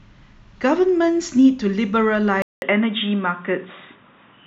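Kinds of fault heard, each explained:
Input switched to a poorer device: at 2.42 s the speech drops out for about 200 ms, then comes back duller and boxier, with nothing above roughly 3.8 kHz, and stays that way to the end. Loudness is about the same, but a faint new background noise sits well under the speech. The likely cause is the system swapping its input mid-recording to a narrower-band microphone or a headset's call profile, bringing its own tone and noise.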